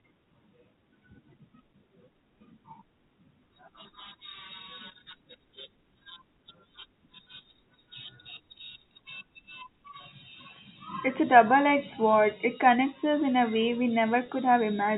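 Speech clip over a telephone-band G.711 path, with nothing above 4 kHz. At 14.26 to 14.28 s, packet loss with pitch repetition briefly holds the sound as a slightly buzzy repeated pitch period, consistent with one lost 20 ms packet bridged by concealment.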